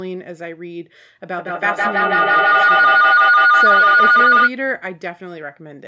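Feedback howl, 1.35 to 4.55 s: a microphone-to-loudspeaker loop gains level each pass, building a tone near 1.5 kHz with the loop repeating roughly every 150 ms, peaking about 12 dB above the speech.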